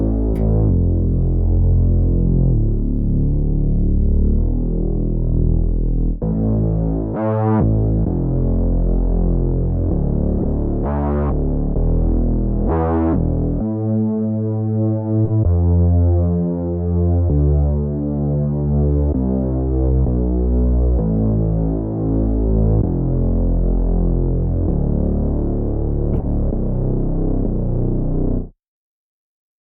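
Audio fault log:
0.34–0.40 s, 6.32–6.36 s, 10.39–10.46 s, 15.25–15.31 s, 26.13–26.26 s: corrupt frame decoded. Damaged compressed frames were played anyway. Misread codes and gains put energy at wrong frequencies. Each lasts a few frames. The one at 6.32 s is quieter. The last spans several frames.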